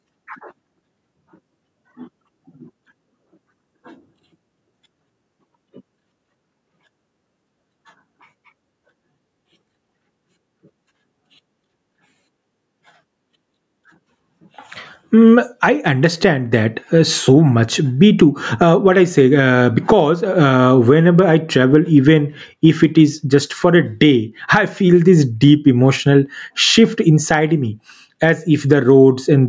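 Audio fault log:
throughout gain pumping: The input gain was likely set far too high, so a fast limiter clamps down on every loud syllable and lets go in the pauses. The gain swings by around 10 dB, leaving the dynamics squashed.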